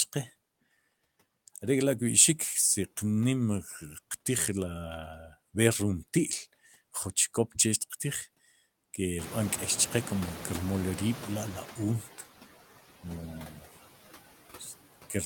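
From the start, the background sinks between phrases and swells under the speech: noise suppressor artifacts, cutting steady noise by about 14 dB frame by frame. Around 9 s the room noise jumps by about 19 dB, ending up about 16 dB below the speech. From 9.18 to 12.01 s it comes through with less reduction at first, then gradually settles: the noise suppressor catching up, its estimate taking 2.83 s to adapt before reaching about 10 dB of reduction. At 13.47 to 13.66 s a brief stretch of speech goes faint and swallowed, dipping by up to about 10 dB for about a fifth of a second: speech cut by the noise suppressor, which mistook it for noise.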